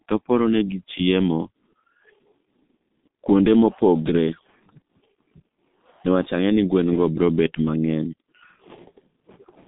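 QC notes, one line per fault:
Throughout: G.723.1 codec. The speech is confined to about 150 Hz to 3.7 kHz and sounds muffled and hoarse, with consonants smeared into one another. The coder rebuilds each 30 ms frame from a coarse, slowly updated voice model, and the heavy damage fits its 6.3 kbit/s mode. Simple band-limiting keeps consonants crisp within the band. Here the rough, hoarse texture comes from that low-rate modelling, not from the filtering alone.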